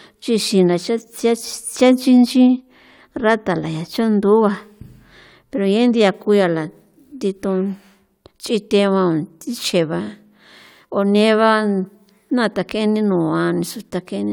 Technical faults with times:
none

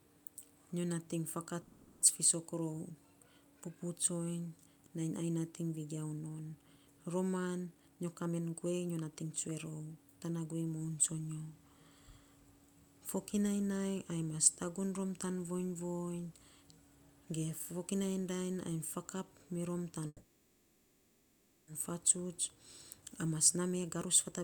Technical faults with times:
1.61-2.02 call audio freeze
7.64-9.80 jitter buffer speed-up
20.07-21.69 call audio freeze
22.16-24.43 jitter buffer speed-up

